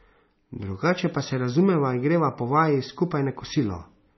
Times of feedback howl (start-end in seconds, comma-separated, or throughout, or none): none